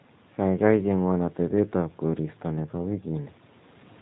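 Throughout the speech, G.729 codec damage is plainly audible: the speech sounds rough and synthetic, which fits a low-rate 8 kbit/s codec. On a spectrogram, nothing appears above 4 kHz.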